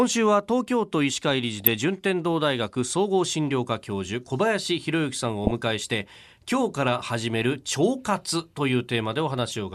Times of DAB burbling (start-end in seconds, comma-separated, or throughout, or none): 1.60-1.76, 5.44-5.51